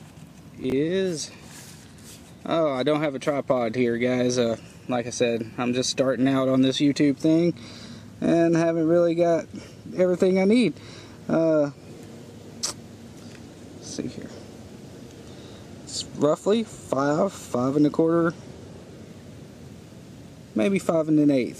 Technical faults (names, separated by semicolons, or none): chunks out of order